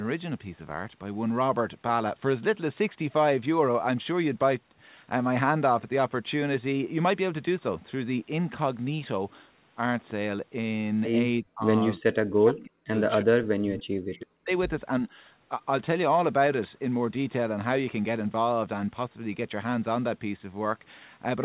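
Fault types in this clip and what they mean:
Speech suppressed in double talk: at 11.4 to 11.64 s, 11.98 to 12.94 s, 13.22 to 14.51 s and 15.05 to 15.19 s, the speech level collapses in chunks, by about 40 dB in the first three and only about 10 dB in the last. This is likely an echo canceller that, while both ends talked at once, could not tell the near talker from the returning loudspeaker echo and turned the whole signal down.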